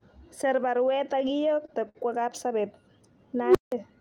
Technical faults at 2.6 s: none

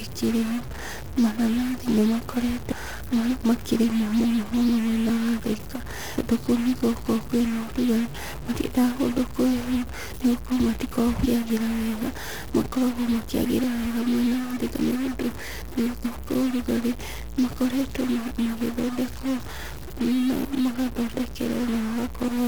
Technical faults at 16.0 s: stuck bit; damaged data in a compressed stream

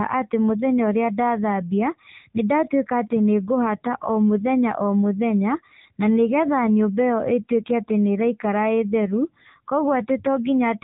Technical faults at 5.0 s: AMR narrowband mobile codec

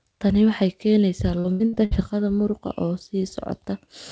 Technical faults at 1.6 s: repeated packet loss (robotic sound)

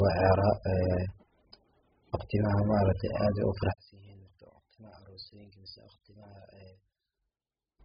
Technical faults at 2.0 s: AAC compression

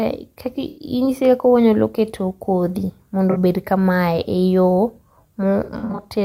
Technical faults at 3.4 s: AAC frame loss with concealment

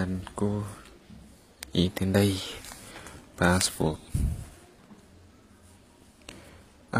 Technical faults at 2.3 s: HE-AAC compression; drift correction step

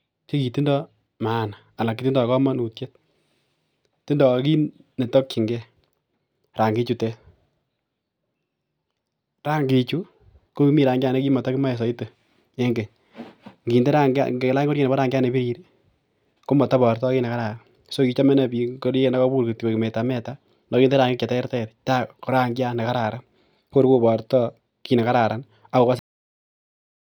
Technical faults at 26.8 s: cut-off end

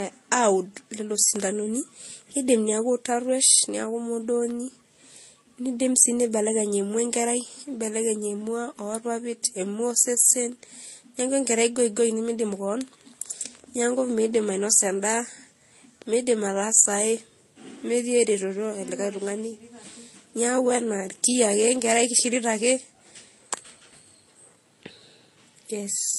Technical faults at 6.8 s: transcoding between lossy codecs

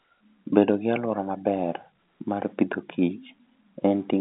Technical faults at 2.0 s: none

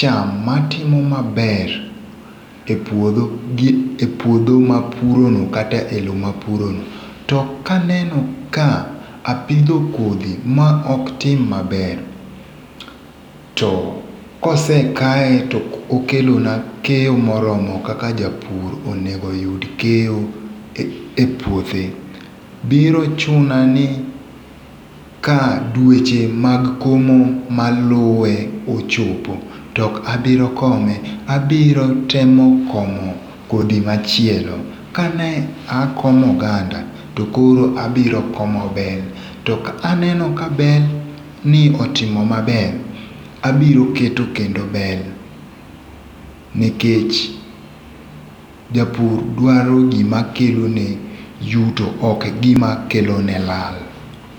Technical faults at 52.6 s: dropped buffer (overrun)

